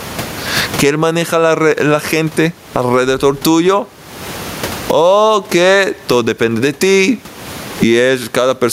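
Throughout, the background swells in pauses and ducks by roughly 25 dB under loud speech. This is gain pumping, likely from excessive microphone gain feeding a fast limiter.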